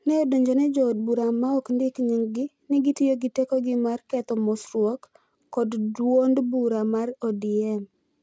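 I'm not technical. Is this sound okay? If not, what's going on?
No, there's a fault running through the whole clip: aliasing. The speech was converted to a lower sample rate, one that fits 16 kHz, without first removing the high frequencies that rate can't hold. Anything above 8 kHz folded back down into the audible range as false, unrelated tones. You hear this as a gritty, metallic edge on hissy sounds like s and sh. The added grit is faint next to the voice itself.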